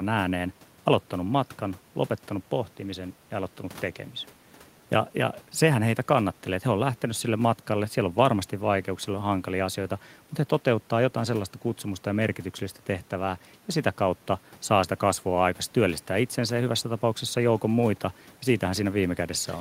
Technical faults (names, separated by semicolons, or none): none